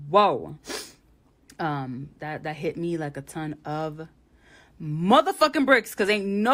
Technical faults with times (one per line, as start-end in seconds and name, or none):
none